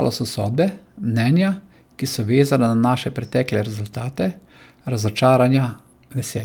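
No technical faults can be heard anywhere in the speech recording; the signal stays continuous and stable throughout.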